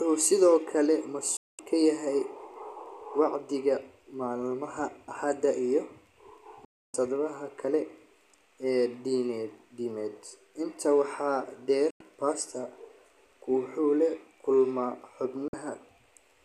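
A speech recording hit by digital broadcast dropout: the receiver lost the signal or rejected corrupted frames and muted until clean ones returned. Each hole opens with a fade of about 3 ms, close to a hard cut, and the speech sent meanwhile is gone, not delayed. Silences fall at 1.37 to 1.59 s (216 ms), 6.65 to 6.94 s (288 ms), 11.90 to 12.01 s (96 ms) and 15.48 to 15.54 s (48 ms). The steps between these lengths fit whole 24 ms frames being discarded.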